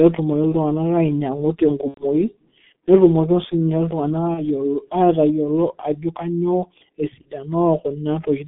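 G.723.1 codec, throughout the clip: the speech passes through a low-rate telephony coder at about 6.3 kbit/s, confined to roughly 150 Hz to 3.6 kHz. Its slow-moving 30 ms voice model smears the signal heavily, leaving a muffled, hoarse tone with blurred consonants.

VoIP packet loss concealed by the speech codec, at 1.88 to 2.05 s, 4.34 to 4.45 s and 7.22 to 7.29 s: the decoder bridges missing packets by extending its last pitch and filter at falling gain, producing brief, fading stretches of buzzy tone or coloured noise. The first gap suggests about 90 ms of lost audio, the others about 30 ms each, and the speech stays weakened or distorted past each gap.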